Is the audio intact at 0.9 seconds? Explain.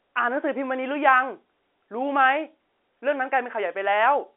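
Yes, the audio is intact at 0.9 seconds: there is no dropout, click or distortion there, only the narrow telephone band of G.711 telephone coding, with nothing above about 3.9 kHz.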